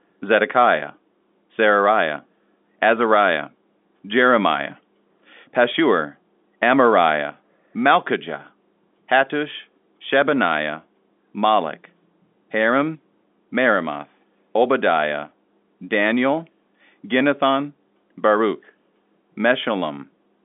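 No technical faults can be heard in this recording.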